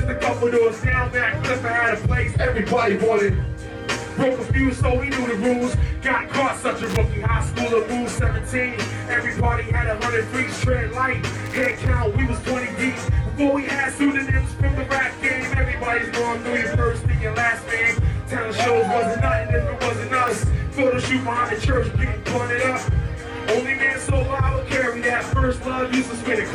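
Two bursts of loose connector crackle break into the audio: a short one from 6.84 to 6.97 s and a longer one from 11.46 to 11.87 s, lasting roughly 0.13 and 0.41 s. Both sound like irregular scratching, which fits a worn or dirty contact making and breaking as the cable moves, chopping the signal. On a waveform these stretches look ragged and broken up, with spiky jumps. On a spectrogram they appear as clusters of uneven broadband streaks. At 20.28 s there is a single sharp click, most likely from dropped samples, where a fraction of a millisecond of the stream went missing and the waveform jumped straight to a later value. Zoomed in, the waveform shows a sudden step at that point, and the spectrogram shows one thin vertical line running across all frequencies.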